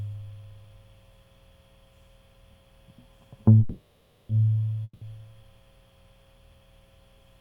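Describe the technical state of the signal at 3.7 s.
At 3.7 s the music stalls into a fading buzzy hiss from 3.59 to 4.31 s, then resumes where it stopped: a call audio freeze, likely from delayed packets emptying the jitter buffer.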